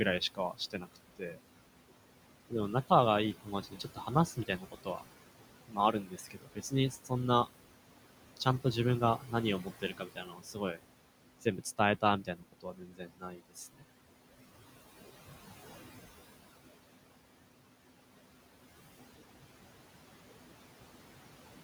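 Noise suppressor artifacts run through the whole clip: the suppressor pulls down whatever bands it judges to be steady noise by about 18 dB, so the room noise, sitting about 14 dB under the speech, dips in pauses and swells back beneath the voice.

Speech cut by the noise suppressor follows at 0.2–1.38 s, 3.44–5.08 s, 5.68–7.12 s, 9.18–10.82 s and 11.41–13.83 s. The suppressor mistakes quieter parts of the speech for noise and drops them by about 16 to 19 dB, so the affected speech sounds swallowed. The lost portions grow from under half a second in the first stretch to around a second in the last two.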